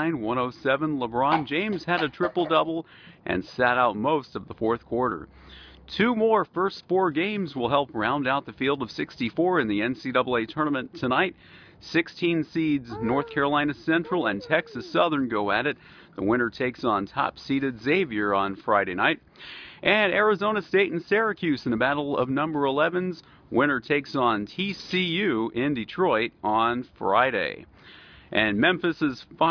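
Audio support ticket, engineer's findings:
No audible faults found.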